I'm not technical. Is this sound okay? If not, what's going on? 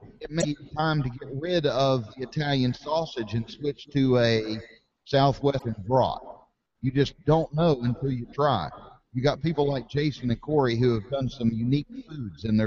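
No. Twice, at 0.38 to 0.45 s and at 5.55 to 5.62 s, damaged data in a compressed stream makes the player misread the file, giving a brief glitch.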